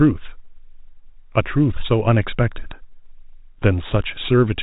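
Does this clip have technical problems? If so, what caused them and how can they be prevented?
No, nothing stood out on listening to this speech clip, which carries the usual telephone band with nothing above about 3.8 kHz.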